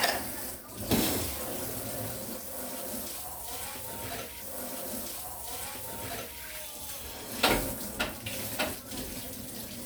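At 4.37 s the audio jumps back with a small blip and replays the preceding passage, running until 6.37 s and adding about 2.0 s. This is a stream segment repeated: the player fetched or queued the same chunk twice, so that stretch plays again.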